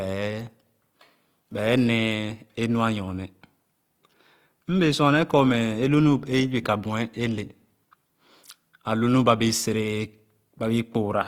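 A speech clip with Opus compression damage throughout. The sound is grainy and rough, with noisy fill in place of clean detail. The top still reaches about 20.2 kHz. This is likely the full-band music mode working at a low bitrate, near 24 kbps.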